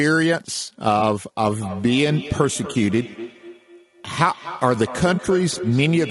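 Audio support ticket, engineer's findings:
Speech rough and grainy throughout. Noise sits between the harmonics, and the top band sounds synthetic. Likely cause: low-delay AAC compression (AAC-ELD). Its short frames resolve pitch poorly and starve bits. The damage level fits a bitrate around 32 kbps.

Brief smeared, noisy patch at 0.99 s. Another at 5.15 s. Each lasts about 30 ms. Symptom of AAC frame loss with concealment. In each case the decoder rebuilt the gap from the previous good spectrum, consistent with one lost frame.

Feedback echo between two devices, from 1.51 s to the end. Speech returns about every fifth of a second, thinner and ringing, peaking about 13 dB below the direct speech. A second device in the room replays this microphone's signal. The echo canceller cannot remove it.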